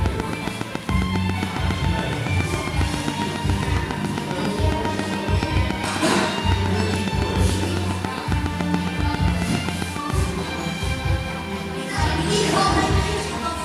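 From 0.06 s to 10.11 s a train of clicks runs through the audio at a steady 7.27 per second, roughly seventy in all, standing about 15 dB above the sound and ticking on through the pauses. The even spacing and near-identical shape point to a likely source in electrical interference or a faulty connection or power supply injecting repeated pulses. On a waveform they show as evenly spaced spikes; a spectrogram shows thin vertical broadband lines.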